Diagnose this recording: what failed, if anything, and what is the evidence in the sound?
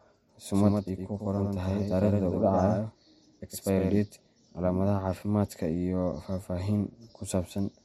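From 0.54 s to 3.98 s the speech is shadowed by a full-band copy, a few decibels quieter and about a tenth of a second late, with no decay, starting and stopping abruptly. This doubled audio track likely comes from a slower second capture path at the driver stage.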